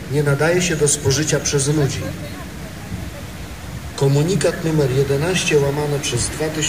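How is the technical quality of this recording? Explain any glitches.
The technical quality is compromised throughout by a stuck bit. For the whole clip a harsh, buzzy grit rides on the sound, and the quiet passages fill with a noise floor rather than falling silent. The likely cause is one data bit held at a fixed value, so roughly half the samples are pushed off by a step of about -35 dBFS. Unlike steady hiss, this noise follows the waveform's shape and flips with its polarity around zero.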